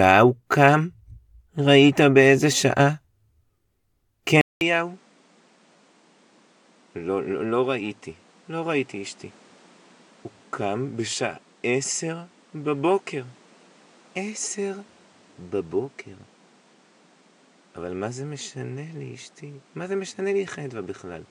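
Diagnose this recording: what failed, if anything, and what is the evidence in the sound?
Input switched to a poorer device at 4.41 s, likely at driver level: after a 200 ms gap, speech drops about 10 dB, loses everything above 10.5 kHz, and gains a new noise floor.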